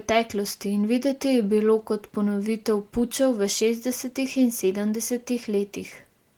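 No faults found in this speech recording.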